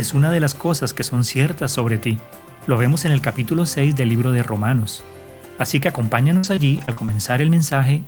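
From 6.37 to 7.14 s, repeated packet loss (robotic sound): six dropouts, longest 59 ms, patched by extending prior audio, leaving choppy fragments.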